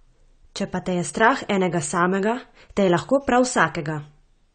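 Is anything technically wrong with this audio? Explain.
Yes, there's a codec problem that runs through the whole speech clip, from start to finish.

It sounds like AAC compression, likely AAC-LC squeezed hard, which fits a low bitrate of around 32 kbps. Nothing is left above 9 kHz, so the top end is dull, and the damage is plainly audible. The encoder has thrown away or roughly approximated detail it judged less audible, so sibilants and sustained sounds come out smeared, with a warbly, fizzy texture.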